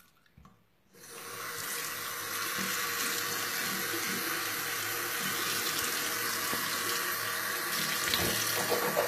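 Throughout the clip the audio was likely squeezed through HE-AAC compression at a very low rate, around 20 kbps, with the treble rebuilt from copied lower bands. The top end sounds gritty and metallic, is plainly damaged, and stops at 14.9 kHz.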